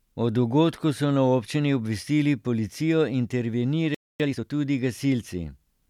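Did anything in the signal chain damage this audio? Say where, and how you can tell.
Yes. The damage is at the playback stage. At 3.95 s the speech cuts off mid-flow and stays silent for about 0.25 s, until 4.20 s. That is a playback stall, likely the player's buffer running dry or its thread being blocked. On the waveform the trace drops abruptly to a flat line and then resumes just as sharply. On a spectrogram it shows as a clean vertical gap with no energy at any frequency.

From 4.20 to 4.44 s the player runs a time-compressed catch-up, squeezing its backlog at twice normal speed. It does this by dropping short segments and cross-fading across the joins, so the speech sounds rushed while the pitch stays put. On a spectrogram the harmonics keep their spacing, but syllables and pauses are packed closer together. The waveform's envelope looks compressed in time.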